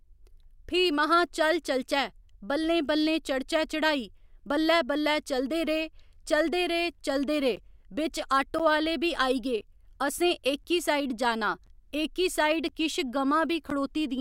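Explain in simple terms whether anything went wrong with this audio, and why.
Yes, something went wrong in the second half. From about 7.56 s to 13.71 s the speech picks up a steady ticking, roughly once every 1.02 s, about seven ticks in all. These are periodic USB or driver dropouts. Something in the background briefly blocked the audio connection on a fixed schedule, and each time a sliver of sound, around a hundredth of a second, was lost and replaced with silence. That tiny gap in the speech is what you hear as a click.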